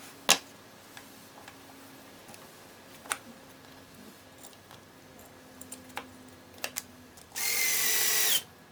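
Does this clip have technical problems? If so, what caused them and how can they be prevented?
Yes. The whole clip is affected by audio read two samples at a time, so it plays at double speed. Everything runs twice as fast and sits a full octave higher, 12 semitones up. The reader treated each pair of samples as a single frame, as if the data held two channels or wider samples. To prevent this, make the reader's channel count and sample format match the stream's actual format.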